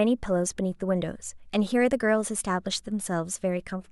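From 0.17 s to 3.70 s, faint clock slip clicks tick through the speech about every 0.4 s, roughly ten in all, each a single dropped or repeated sample. The likely cause is two unsynchronised clocks drifting around 50 ppm apart. Their steady spacing sets them apart from random dropout clicks.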